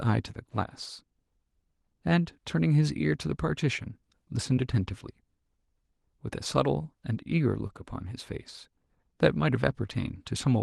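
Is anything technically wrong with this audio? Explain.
Yes. There is short concealed packet loss at 4.55–4.59 s and 7.67–7.71 s. About 20 ms of speech failed to arrive each time, and the receiver synthesised a continuation of the preceding sound before crossfading back. Each gap is heard as a brief smear or wobble.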